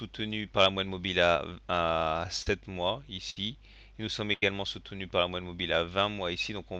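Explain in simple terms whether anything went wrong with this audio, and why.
Yes, a few things went wrong, all from pieces of the audio getting lost on the way.

At 2.42 to 2.47 s there is a short concealed packet loss. About 40 ms of sound never arrived, so the receiver guessed it by stretching the sound just before and then blending back in. You hear a brief smear or wobble. What sets it apart is how brief it is: the gap is filled by continuing the last sound and blending back into the real audio.

At 3.30 to 3.37 s and again at 4.33 to 4.52 s there is a burst of packet loss, where several pieces went missing in a row, about 60 ms the first time and 80 ms the second. The receiver held the last sound for longer and let it fade, which comes out as a held buzz or fading hiss, then the audio picks up further along. These leave a chunk of audio missing.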